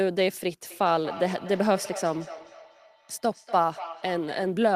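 From about 0.71 s to 4.65 s there's feedback echo between two devices: each bit of speech comes back roughly every fifth of a second, getting thinner and more ringy with each pass. The loudest repeats sit about 14 dB below the direct speech. What's going on is that a second device in the same room is playing this one's audio, this device's mic grabs it again, and neither echo canceller touches sound the other device is playing.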